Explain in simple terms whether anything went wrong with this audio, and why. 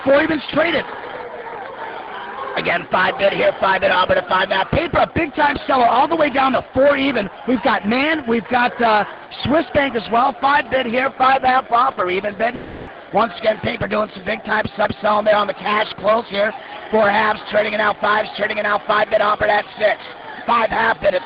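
Something does go wrong around 12.55 s: the sound smears into a fading buzzy hiss for about a third of a second, then picks up again at 12.89 s with that bit gone. That's likely a long network dropout, where the receiver patched over audio that never arrived.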